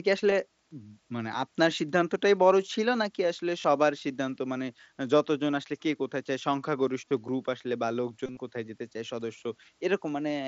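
Concealed Bluetooth headset packet loss occurs at 0.30 s, 3.62 to 3.64 s, 7.09 to 7.11 s, and 8.26 to 8.37 s. Voice packets from headset to phone went missing. The receiver filled each gap by repeating a matching stretch of recent waveform. The first three gaps last 15 to 22.5 ms. The last scatters 60 ms of loss over about 105 ms, with a 30 ms run. That run gives a brief buzzy hold and a small warble. The mSBC wideband codec passes speech up to 8 kHz throughout, with light codec damage.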